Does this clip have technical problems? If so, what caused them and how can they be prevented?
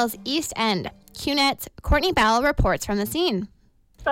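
No, there are no technical problems to be heard in this clip. Nothing here calls for a cause to be traced or a preventive step to be taken.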